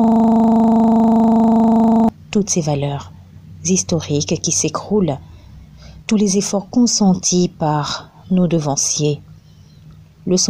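Until 2.09 s, a system hang loop, already running at the start, replays one frozen 40 ms ring-buffer slice, producing a steady 25 Hz buzz.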